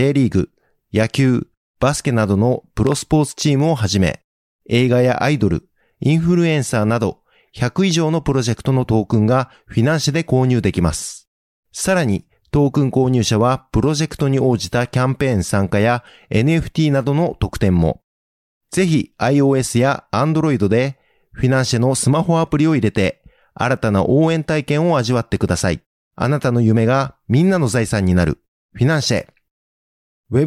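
A speech recording with one clear problem: a loud pop at about 2.87 s, running to 2.94 s, made up of two sharp hits in quick succession and landing roughly 10 dB above the speech level. The speech carries on underneath without a break, which points to a voltage spike added to the signal, likely from a plug being moved, a switch, static or a driver glitch, with the downstream circuitry shaping it into that double thump.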